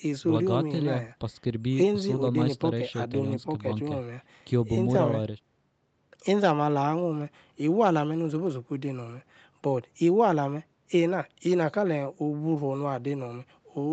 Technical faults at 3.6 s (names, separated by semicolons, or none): none